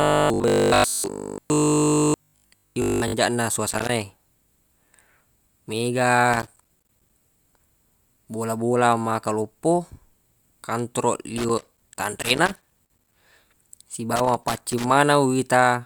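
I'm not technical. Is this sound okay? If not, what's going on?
No. From 0.02 to 3.16 s the speech has a stiff, metallic buzz at 50 Hz. This is robotic sound from repeated short buffers, likely caused by audio arriving too slowly, so tiny 20 ms slices are replayed in place of most of the real sound.

Bursts of scratchy crackle come at 3.70 to 3.89 s, 6.33 to 7.18 s, 11.38 to 13.18 s and 14.16 to 14.98 s. That's loose connector crackle: a worn or dirty plug contact briefly cutting the signal in and out.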